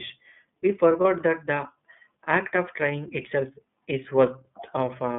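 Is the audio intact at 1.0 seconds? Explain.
No. From 1.01 to 1.05 s, just before "that the act of", there are lost iLBC frames. A gap of about 40 ms, which fits a single lost 30 ms frame, was filled by the decoder repeating the last pitch cycle with added noise. It is heard as a brief held, slightly buzzy vowel, and the voice recovers at once. On a spectrogram the harmonics run flat and smeared across the gap. On a waveform a short stretch of near-identical repeated cycles appears.

The moment also carries the iLBC codec, present throughout. Sound is confined to about 150 Hz to 3.5 kHz, and the coding fits a rate near 13 kbps with 30 ms frames. The voice sounds plainly rough and synthetic, since each frame's excitation is coded coarsely. A spectrogram shows a sharp ceiling at 3.5 kHz with empty bands above, and a waveform looks band-limited, lacking fine high-frequency detail.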